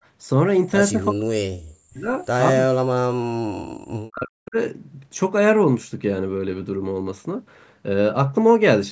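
A speech recording that shows speech suppressed in double talk twice, from 0.93 to 2.12 s and from 2.81 to 4.56 s. In both stretches the talker's level collapses, at its deepest by roughly 40 dB, so the speech fades and breaks up in pieces. The likely cause is an echo canceller that could not distinguish the near talker from loudspeaker echo while the far side spoke, and attenuated both. The call microphone processing limits content to 8 kHz.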